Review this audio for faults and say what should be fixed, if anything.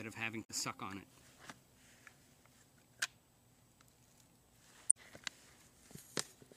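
Two bursts of damaged data in the compressed stream occur, at 0.43 to 0.50 s and at 4.89 to 4.97 s, each lasting about 70 ms. In both places the decoder misreads corrupted frames and loses sync until it finds a valid frame header. This differs from a click, which would be a single sample-scale spike rather than tens of milliseconds of disrupted decoding. To prevent it, check the file's integrity or re-obtain it from the source.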